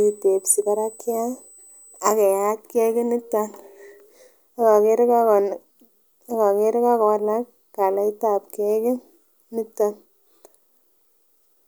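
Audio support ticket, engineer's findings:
USB whine, 0.0 to 2.0 s: fixed 8 kHz tone, about 25 dB below the speech. Pitch matches the 125 microsecond USB microframe rate, with current pulses leaking via power or ground. Unlike mains hum, the tone sits at 8 kHz, not 50 or 60 Hz harmonics.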